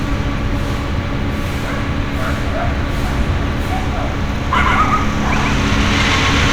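Everyday sounds, with a doubled audio track from 4.55 s to the end: an equally loud, undecayed copy trails by roughly 150 ms, likely from a second, slower capture path, showing as repeated, offset transients on the waveform and spectrogram.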